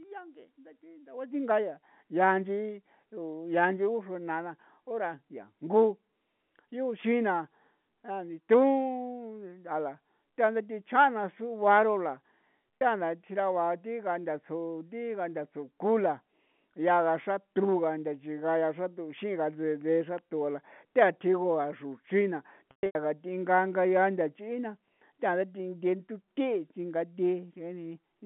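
Telephone-band speech, limited to roughly 150 Hz to 3.4 kHz by G.711 coding. Packet loss with pitch repetition occurs twice. At 12.79 to 12.81 s, a briefly held, buzzy tone bridges a 30 ms gap, consistent with one lost packet. From 22.71 to 22.95 s, 210 ms are lost, with runs up to 120 ms fading to silence.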